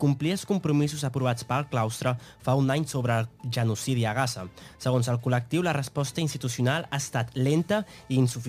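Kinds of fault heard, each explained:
Crude rate conversion: a gritty, inharmonic fizz runs throughout, strongest on loud and high passages and roughly 30 dB below the sound. Samples were picked nearest-neighbour without filtering, which fits a 48 kHz to 44.1 kHz change, so a repeating timing error creates unrelated tones.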